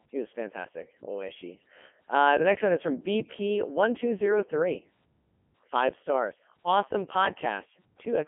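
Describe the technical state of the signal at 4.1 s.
At 4.1 s, like the rest of the clip, the speech runs through a Codec 2 vocoder. It's rebuilt from sine waves, so it sounds heavily robotic and buzzy, which fits 3.2 kbit/s, with nothing above 3.5 kHz.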